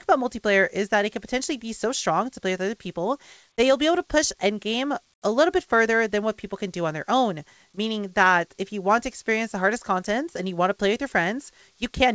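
From 5.14 to 5.22 s, a span of about 80 ms, the real background drops out and a flat, featureless hiss takes its place, about 19 dB quieter than what surrounds it. This is comfort noise in place of the background. The likely cause is discontinuous transmission: the sender judged the quiet stretch to be silence, stopped sending, and the receiver filled the gap with synthetic noise. The call path's G.722-style band limit, nothing above 8 kHz, applies throughout.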